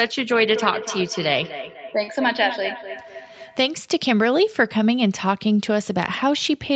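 From 0.54 to 3.68 s the speech carries a feedback echo between two devices: a second device in the room replays the call and its microphone sends it back, so each word returns roughly every third of a second, thinner and ringing, peaking about 11 dB below the speech.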